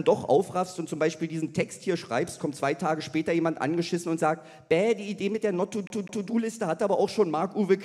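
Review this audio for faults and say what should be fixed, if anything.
CD stuck on one turn, from 5.87 to 6.28 s: a slice of about 203 ms plays twice in a row, with a brief mute at each jump, giving the quick, even stutter of a skipping disc. A scratch or blemish at that point on the disc knocks the laser back one track, so it rereads the same stretch on the next rotation. Re-rip the source with secure, error-checking extraction from a cleaned or replacement disc.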